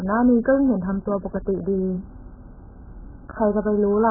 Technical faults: AAC compression

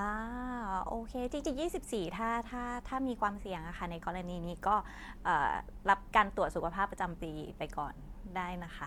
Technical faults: none

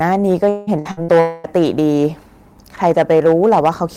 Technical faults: hard clipping; repeated packet loss (robotic sound); long network dropout

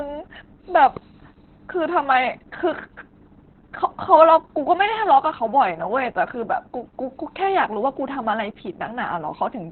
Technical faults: Opus voice compression

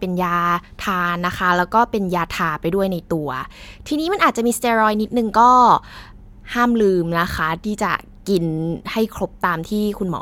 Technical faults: none

